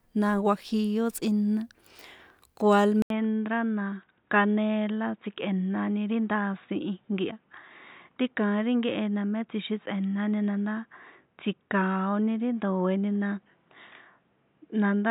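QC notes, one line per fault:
3.02–15.1 s, input switched to a poorer device: after an 80 ms silence the speech turns dull and boxy, with nothing above 3.8 kHz and a new faint noise floor around 45 dB down, level unchanged. The likely cause is a switch to a narrower-band microphone or headset call profile.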